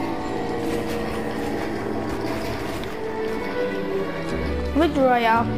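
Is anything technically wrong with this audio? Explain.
No, nothing technically wrong can be heard in this audio. No faults show up anywhere in the recording.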